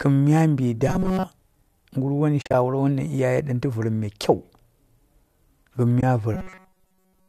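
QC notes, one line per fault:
0.88–1.23 s and 6.35 s to the end: robotic sound from repeated short buffers. A rigid, metallic buzz at 188 Hz sits on the speech, with most of the audio replaced by loops. This is likely a starved buffer repeating roughly 5 ms chunks. Unlike a muted loss, the sound never drops out.
2.42–2.54 s and 6.01–6.03 s: AAC frame loss with muting. The first event leaves 90 ms of soft-edged holes scattered over 120 ms, the longest about 40 ms. The second is a single 20 ms hole. The gaps fit 10 ms frames fading out and back in, with no buzz.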